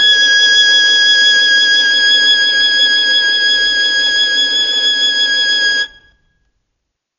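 Throughout the music, a low-bitrate AAC compression stage has likely starved the encoder of bits, a loss that fits AAC-LC at around 32 kbps. Nothing survives above 7 kHz, so the top end sounds dull, and sustained tones warble and smear with a fizzy edge.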